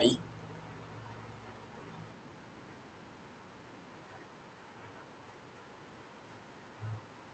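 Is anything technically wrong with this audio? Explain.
No, nothing is technically wrong with this audio.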